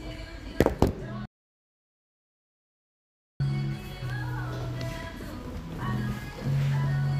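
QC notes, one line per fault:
1.26–3.40 s: audio dropout to silence. The sound cuts off mid-flow and returns just as abruptly after about 2.14 s of silence with no room tone, unlike a natural pause or noise gate. The input likely dropped out while recording continued, so that stretch is gone.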